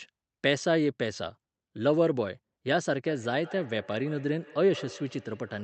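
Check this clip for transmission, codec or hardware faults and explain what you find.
One transmission fault is audible: feedback echo between two devices, from 3.07 s to the end of the speech clip. Each phrase returns roughly every 150 ms, thinner and more ringing on each pass, peaking at about 19 dB below the speech. Two devices on the same call share a room, so one device's microphone picks up the other's loudspeaker, and neither echo canceller removes sound it didn't play itself. Room reverberation would smear the sound without discrete, evenly spaced returns. The call codec, limited to about 8 kHz, passes the repeats along with the speech.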